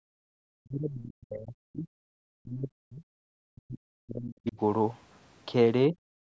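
From the very start to 0.05 s, and again at 0.57 to 1.88 s, 2.4 to 3.04 s and 3.5 to 4.57 s, the speech is cut by up to about 40 dB, with a lighter dip of about 15 dB at 5.91 s. This is speech suppressed in double talk, likely an echo canceller pulling the talker down along with the far side's echo. Unlike a dropout, it follows the overlapping speech. At 6.24 s the background is gated by the echo canceller: the room sound drops by about 37 dB for a moment at the end. It differs from the speech dips because only the ambience falls away, while the canceller briefly clamps the microphone.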